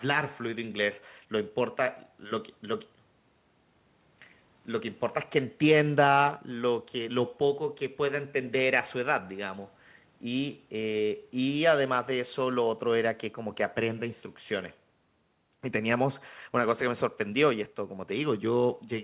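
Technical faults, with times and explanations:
Nothing stood out on listening to this speech, which is carried over a call line with its sound stopping at about 4 kHz.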